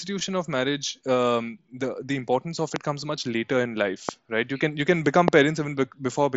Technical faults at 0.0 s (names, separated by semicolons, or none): none